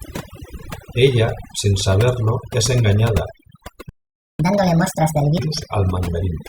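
Overdone noise removal runs through the whole speech clip. The suppressor is set so aggressively that it drives individual frequency bands down or out whenever they sit near its noise estimate. The background collapses into near-silence with twinkling specks, and the quieter components of the voice are stripped away along with it.

At 3.89 s a playback stall cuts the audio off mid-flow, leaving about half a second of silence (roughly 498 ms) until 4.39 s. The likely cause is the player running out of buffered data or its output thread being blocked, after which sound resumes.

From 4.39 s to 5.39 s comes catch-up at higher speed. The player resamples its backlog to 1.5 times normal rate to recover the lost time. The voice is audibly hurried and raised by around seven semitones for that second before dropping back to normal speed and pitch.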